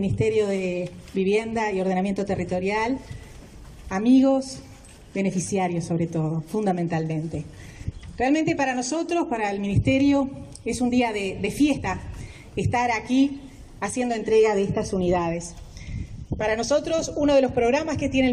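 Compressed frames skipped at 11.76 to 11.78 s: the audio jumps forward by roughly 50 ms, which fits about two whole frames of around 23 ms each being dropped, because they were missing from the file or rejected by the decoder as damaged. After the splice, the sound resumes slightly further along than expected.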